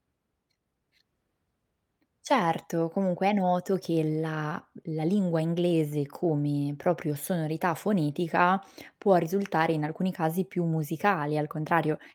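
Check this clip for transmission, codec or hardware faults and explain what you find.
Nothing in the speech points to a fault anywhere in the chain. There is nothing that calls for a time or a cause.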